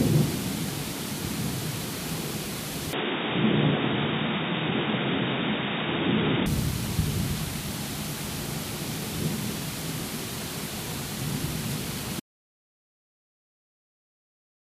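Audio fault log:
2.93–6.46 s, input switched to a poorer device: sound abruptly turns dull, nothing above 3.8 kHz, faint new hiss, no gap or level jump; likely a narrower-band input took over.
12.2 s to end, audio dropout to silence: sound cuts to total silence with no room tone and never returns; likely the input was lost while recording continued.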